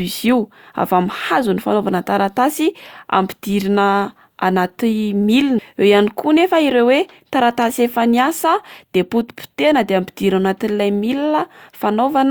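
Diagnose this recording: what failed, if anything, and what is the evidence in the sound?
Compressed frames skipped at 5.58 s, a codec-stage failure. The speech lurches forward, losing roughly 300 ms. The decoder dropped whole frames, either missing from the file or rejected as corrupt, so playback resumed further on. The jump is consistent with about ten frames of 32 ms each.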